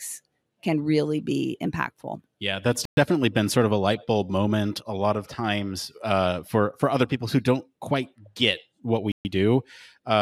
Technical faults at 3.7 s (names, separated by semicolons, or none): none